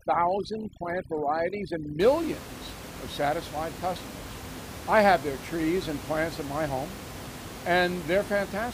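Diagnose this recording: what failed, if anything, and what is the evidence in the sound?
Overdone noise removal in the call-processing stage affects the opening 0.0 to 2.0 s of this speech. The suppressor is set too aggressively: bands it judges to be near its noise estimate are pushed far down or switched off, so the background drops and breaks up into twinkling specks and the quiet parts of the voice are stripped away. Codec artefacts would persist across the whole clip; here the effect ends at 2.0 s, after which the room noise sits about 13 dB below the speech.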